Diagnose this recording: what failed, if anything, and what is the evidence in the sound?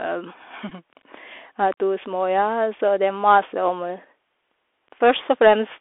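Codec stage: the whole clip runs through a Bluetooth CVSD headset codec, band-limited to roughly 300 Hz–3.5 kHz, with grainy hiss and scratchy s sounds from the adaptive one-bit step.

Wireless link: at 0.69–0.72 s a short Bluetooth headset packet repeat gives a brief buzz near 267 Hz over about 11 ms, which fits three lost packets.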